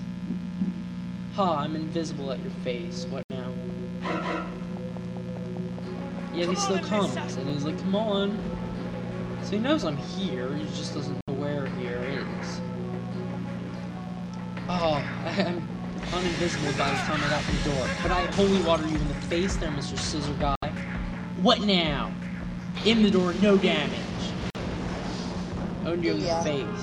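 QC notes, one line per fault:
3.23 s, 11.21 s, 20.55 s, 24.50 s: Bluetooth dropout. The sound cuts to silence for about 70 ms (about 46 ms at 24.50 s), then resumes further along, likely from wireless packets arriving too late and being discarded.
7.50 s, 17.51 s: overlapping chunks. A 13 ms slice plays twice, causing a brief stutter-click. The 10 s spacing fits fixed-length processing chunks, each starting before the previous one ended.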